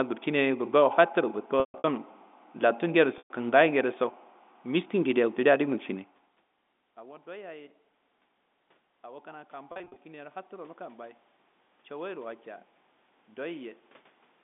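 Packet loss with pitch repetition first hits from 1.6 s to 1.84 s. About 200 ms of audio went missing, scattered over 240 ms, with the longest gap 140 ms. The receiver filled each gap by repeating the last pitch period, so the voice holds on a buzzy tone that fades out and then cross-fades back in. The same happens from 3.18 s to 3.30 s, where 120 ms is lost in a pattern that fits 20 ms packets, giving another held, fading buzz.

By 9.01 s the input level had dropped by about 24 dB, and from 9.01 s to 11.26 s the automatic gain rising response followed. The gain control climbed by about 5 dB over roughly two seconds, so voice and room noise swell together, but the level stays well short of where it was before.

Within that swell, from 9.72 s to 9.96 s, 140 ms is lost again in scattered short gaps of no more than 40 ms. Each gap is bridged with a brief repeated pitch period, heard as a slightly held, buzzy catch in the sound.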